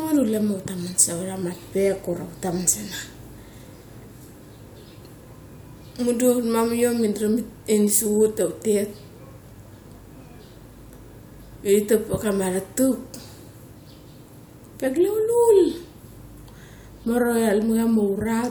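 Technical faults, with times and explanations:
No technical faults detected.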